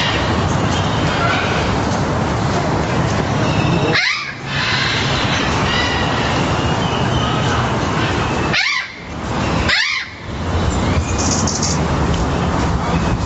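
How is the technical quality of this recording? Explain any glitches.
The recording has one clear fault. Gain pumping runs through the whole clip. The gain swings by around 25 dB. The likely cause is input gain set far too high, with a fast limiter clamping every peak. Nothing reaches above 8 kHz, which fits the call's Opus codec and microphone filtering.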